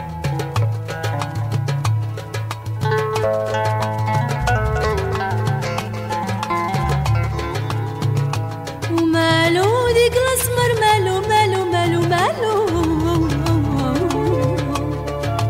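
No technical faults can be heard anywhere in the clip.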